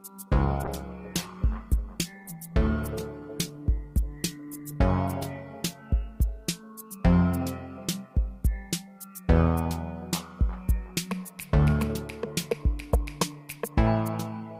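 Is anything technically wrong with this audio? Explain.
Yes. From 0.65 to 7.57 s there is a call bitrate drop. The link's bandwidth estimate fell, so the encoder coded far more coarsely and cut the high frequencies. The sound turns rough and muffled, worst for about 4.6 s. This fits a fall from 128 to 20 kbps.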